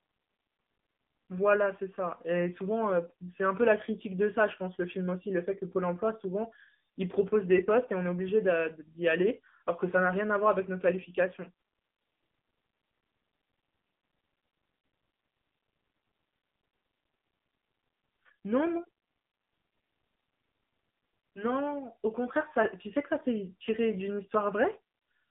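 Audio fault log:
throughout, AMR narrowband mobile codec: the speech sits in a 200 Hz to 3.6 kHz phone band, with nothing above 3.7 kHz. It has a plainly buzzy, synthetic edge from the pulse-driven vocal-tract model, which points to a low mode around 7.4 kbps.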